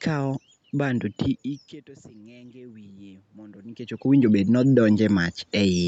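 From 2.12 to 4.83 s there's automatic gain rising: the input drops by about 24 dB as the talker shifts, so the AGC slowly winds its gain up by about 6 dB. You hear the voice and the room noise swell together.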